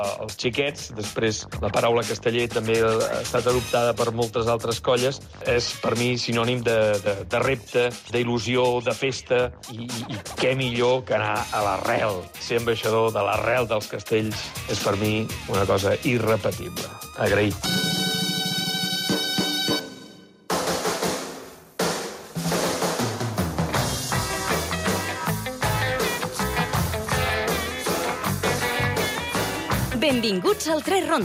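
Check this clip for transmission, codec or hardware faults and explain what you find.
No transmission, codec or hardware faults were found.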